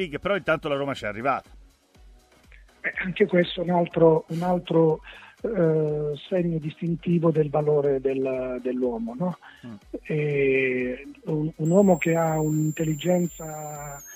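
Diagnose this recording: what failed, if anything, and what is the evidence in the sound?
Switching supply whistle from 11.65 s to the end at 14.15 s: a high whistle near 7 kHz, wandering between 6.5 and 7.7 kHz, sits around 20 dB below the signal. It enters at the analogue power stage, where a switching regulator's audible burst-mode cycling, or its beating with another supply, couples into the audio path.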